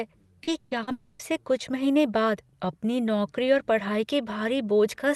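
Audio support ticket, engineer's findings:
Short concealed packet loss, 0.43–0.50 s. Brief smear in the sound, 40 ms of the stream never reached the decoder in time. Receiver extended the last sound across the hole, then crossfaded back. Component: jitter buffer / packet loss concealment.

Short concealed packet loss, 0.83–0.90 s. Same signature: 40 ms missing, bridged by concealment, audible as a short wobble before the real audio resumes. Same component.

Burst of packet loss, 0.59–0.74 s. Roughly 120 ms lost in a run. Concealment held the last sound and let it fade rather than drop to silence; audio picks up further on with that 120 ms absent. Component: network transport feeding the jitter buffer, concealment decaying through the gap.

Long network dropout, 0.91–1.22 s. Sound stalls into a fading continuation of the previous sound for about 280 ms, with no fall to silence, then resumes further on with that stretch gone. 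Likely cause: stream interruption upstream of the jitter buffer, concealment stretched across the gap. Opus call path, audio band topping out near 12 kHz.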